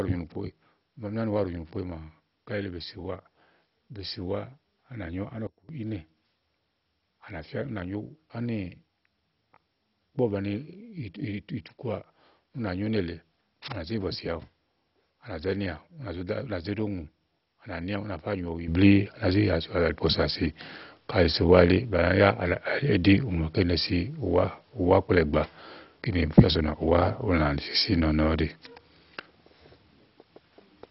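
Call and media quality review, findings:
Dull, gurgling, granular speech throughout, nothing above 5.6 kHz. Likely MP2 compression at a very low rate, around 32 kbps, with upper sub-bands switched off.

Speech and background drop together by about 18 dB from 5.47 to 5.69 s, then rise about 12 dB at 18.68 s and stay up. Likely a sudden gain jump, an unramped digital gain step.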